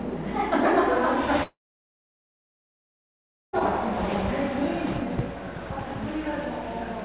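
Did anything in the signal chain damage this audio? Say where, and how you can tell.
Yes, at the network stage: a long network dropout, likely, from 1.43 to 3.56 s. The last sound continues as a brief fading buzz, then about 2 s of near silence, and playback resumes past the lost material. A splice or mute would lack that decaying concealment tail.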